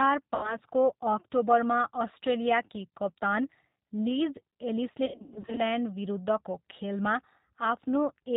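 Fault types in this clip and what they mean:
G.729 codec: Throughout the clip the speech sounds slightly rough and synthetic, with a muffled top end because nothing above 4 kHz survives, and the coding damage is plainly audible. The decoder rebuilds each 10 ms frame from a vocal tract filter, a pitch predictor and a handful of pulses rather than the original waveform. That fits the 8 kbit/s G.729A variant of this narrowband VoIP codec.
VoIP packet loss concealed by the speech codec: From 0.35 to 0.57 s, just before "अक्टोबरमा अस्ट्रेलियाकी कप्तान लिज", the speech smears into a fading buzzy tone or coloured noise. From 5.06 to 5.61 s it breaks up repeatedly, in runs up to 100 ms long. The decoder stretched its last pitch and filter over missing packets while lowering the gain. The first gap suggests about 80 ms lost. The second points to about 320 ms scattered over 520 ms.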